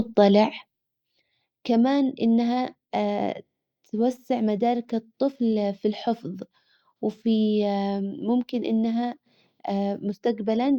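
At 1.18 s the speech falls abruptly by about 6 dB and stays lower to the end. This is likely one channel dropping out, halving the mono sum. The clean step, with no ramp or recovery, sets it apart from a fade or gain ride.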